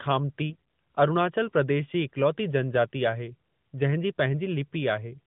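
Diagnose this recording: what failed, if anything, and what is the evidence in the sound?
A brief hoarse, gargly scratch from 0.50 to 0.56 s, just before "अरुणाचल प्रदेश जी इक्लौती", points to AMR bit errors: network corruption of weakly protected codec bits, around 7 percent.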